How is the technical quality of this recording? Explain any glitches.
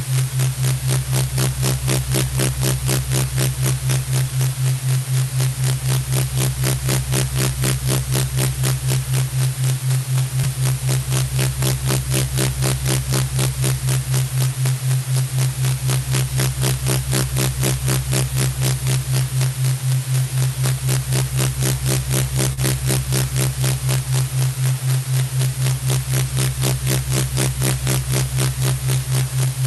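The recording has two problems: a wraparound distortion on loud peaks throughout, and two brief dropouts patched over by the call's concealment.

Integer overflow runs the whole way through. Peaks pushed about 3 dB past the limit wrap to the opposite sign instead of clipping, so a small share of loud moments crack violently.

Short concealed packet loss hits at 10.41 to 10.45 s and 22.53 to 22.59 s. Audio arrived late, and the receiver extended the previous sound, leaving a quick smear or wobble.

It came through a call codec, with the top end rolled off above 12 kHz.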